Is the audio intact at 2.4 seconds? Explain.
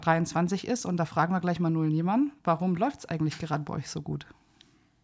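Yes, the audio is intact at 2.4 seconds, with no dropout, click, distortion or other fault at that moment.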